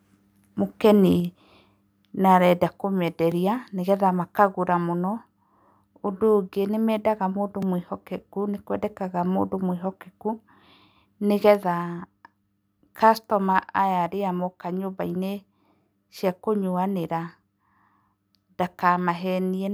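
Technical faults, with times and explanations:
3.32 s and 7.62 s, block of digital silence: two sharp ticks in the speech, the second just after "mendaga mũndũ". About 1.7 ms and 2 ms of samples drop out and return with no fade. This points to an output buffer left unfilled in time.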